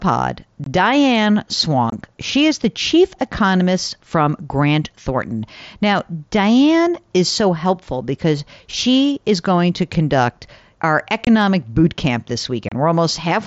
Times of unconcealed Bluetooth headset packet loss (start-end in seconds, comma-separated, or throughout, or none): 0.64-0.67, 1.90-1.93, 11.25-11.27, 12.69-12.72